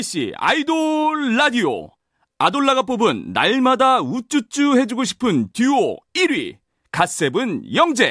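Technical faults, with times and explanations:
No technical faults can be heard in this speech recording.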